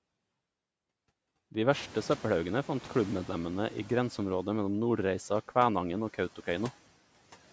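From 1.71 to 4.04 s, the noise suppressor is catching up: after room noise jumps about 22 dB, it passes through, then fades about 5 dB over 2.33 s.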